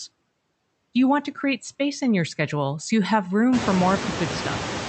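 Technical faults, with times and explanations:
Throughout: noise suppressor artifacts. The suppressor pulls down bands it takes for steady noise by about 16 dB, so room noise sinks between phrases and swells back under speech, especially after the noise rises near 3.5 s.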